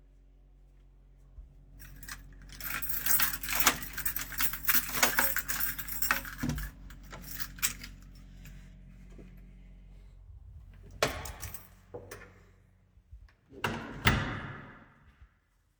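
No technical faults are audible.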